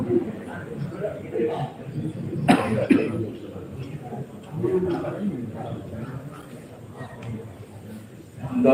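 No technical faults are audible.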